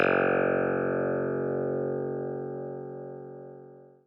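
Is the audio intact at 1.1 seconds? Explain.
Yes, the audio at 1.1 seconds is intact, with no dropout, click, distortion or other fault to be heard at that moment.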